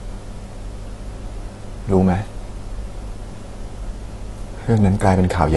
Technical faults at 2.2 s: AAC compression

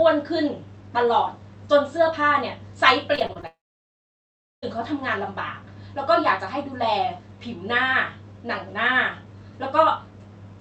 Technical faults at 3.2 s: repeated packet loss (robotic sound)

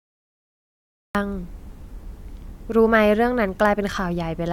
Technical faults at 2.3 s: none

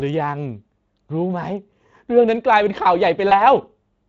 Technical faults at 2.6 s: Speex codec

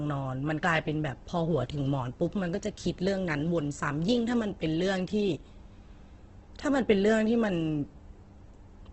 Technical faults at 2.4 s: Opus compression

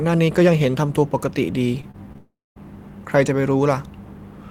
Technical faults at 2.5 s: long network dropout

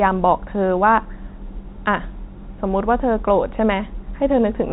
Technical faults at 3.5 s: none

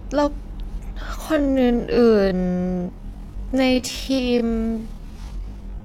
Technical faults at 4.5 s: time-stretched section

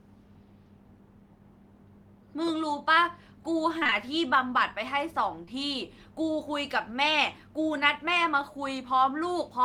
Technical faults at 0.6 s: none

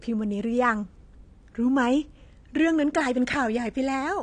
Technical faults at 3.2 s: AAC compression

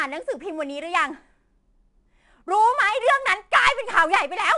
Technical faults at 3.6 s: 4-bit ADPCM compression

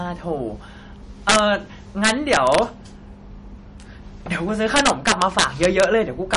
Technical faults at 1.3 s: MP3 compression; integer overflow

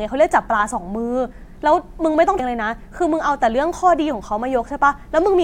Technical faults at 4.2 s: none

